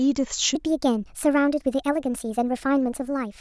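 From 0.55 s to the end, a wrong sample rate fault plays the samples faster than they were captured, which fits 16 kHz audio played at 22 kHz. The speech runs 1.38 times too fast and about 5.5 semitones high, sounding hurried and chipmunk-like.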